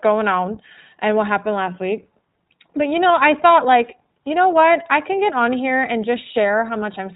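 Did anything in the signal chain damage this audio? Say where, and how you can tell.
Yes, at the codec stage: the speech has passed through the iLBC codec, and the damage is plainly audible for the whole clip. Nothing is present above 4 kHz, so sibilants are dull and the sound is narrowband. Voiced sounds have a rough, slightly synthetic edge. iLBC codes each frame's excitation independently of the previous frame, and the roughness fits 20 ms frames at around 15.2 kbps.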